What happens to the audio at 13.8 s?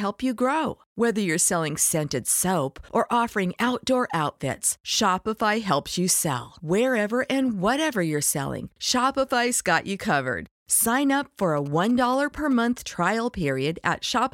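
Nothing goes wrong at 13.8 s; the speech carries on intact through that moment.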